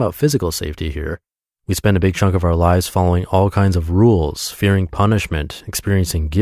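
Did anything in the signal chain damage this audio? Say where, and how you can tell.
No, nothing along the chain from capture through to playback has left an audible mark on this speech recording.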